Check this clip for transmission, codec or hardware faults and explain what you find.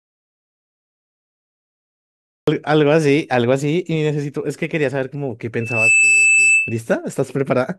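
Two faults turn up. There's an audio dropout to silence at the very start, then a loudspeaker feedback squeal later on.

From the first moment up to about 2.48 s the clip is dead silent, with no room tone at all, so the dropout is already under way when the recording begins. It sounds like plain silence, most likely from the input being lost or muted while the recorder kept writing, and any speech in that stretch is gone.

From 5.60 to 6.80 s a feedback squeal at 2.6 kHz swells up over roughly a third of a second and ends up sitting a few dB above the speech. The microphone is hearing its own loudspeaker, and at that one frequency the loop gain tops one, so the tone feeds itself into a steady whistle.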